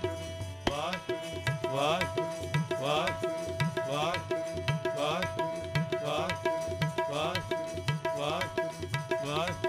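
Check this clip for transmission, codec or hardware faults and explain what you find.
One fault runs through the whole clip: crude rate conversion. It sounds consistent with a 48 kHz to 44.1 kHz change done by simply dropping samples, without filtering. The repeating error sits roughly 25 dB below the signal. It adds a gritty, inharmonic fizz that tracks loud and high sounds.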